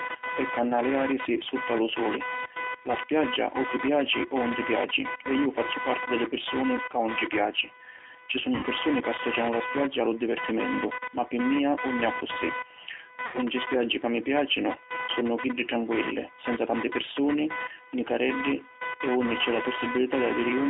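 Computer activity noise runs through the whole speech clip. A buzz pulsing at around 500 Hz sits fairly high, roughly 10 dB below the voice. It follows the machine's load, not the speech.

G.729 codec damage is plainly audible throughout. The line band is 300 Hz to 3.6 kHz. The voice sounds rough and synthetic, which fits an 8 kbit/s G.729A stream.

At 8.55 to 8.68 s, VoIP packet loss is concealed by the speech codec. About 80 ms went missing, which fits four lost packets. The decoder stretches the last sound into a fading buzzy tone or coloured noise before "ca associanu la spiaggia".

The same happens at 13.26 to 13.40 s, again about 80 ms. The voice stays weak briefly before "spiaggi ca mi".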